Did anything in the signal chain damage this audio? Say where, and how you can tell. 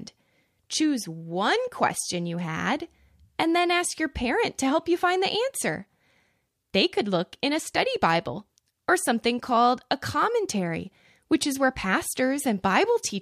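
No, nothing in the signal chain has damaged this speech recording. No stage, from the wiring and conversion through to storage and playback, leaves any audible trace on it.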